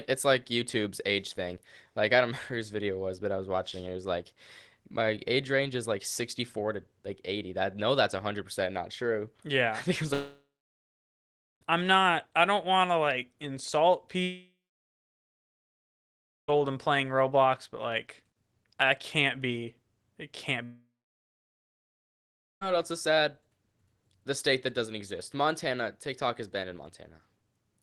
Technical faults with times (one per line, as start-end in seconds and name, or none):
10.13-11.63 long network dropout
14.23-16.50 long network dropout
20.64-22.63 long network dropout